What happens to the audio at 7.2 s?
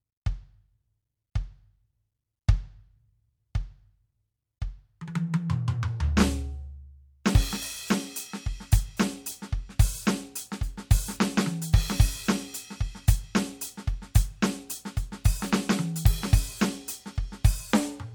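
At 7.24 s, a sharp musical attack is preceded by pre-echo: a hiss about 11 ms long, roughly 14 dB above the quiet before it. The codec spread the quantisation noise sized for the loud attack across its whole transform block, so the noise leaks backward into the silence. The spread fits a block of about 26 ms that never switched to shorter blocks. On a spectrogram, a broadband haze smears leftward from the attack's vertical edge. The waveform shows low-level fuzz just before the onset, softening its crispness.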